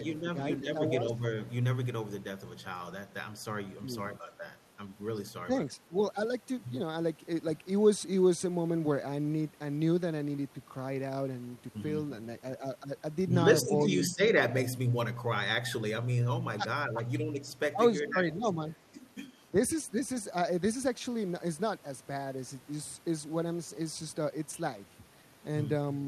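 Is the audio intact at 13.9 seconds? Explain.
No. Speech suppressed in double talk runs from 13.88 to 13.93 s. The echo canceller likely mistook overlapping talk for loudspeaker echo and turned the local talker down, so the speech dips by around 5 dB for roughly 50 ms.

Just before that, an echo leak appears from 13.79 to 13.83 s. A faint copy of the speech comes back 322 ms late, around 30 dB below the speech, likely because the far side's canceller let residual loudspeaker pickup through.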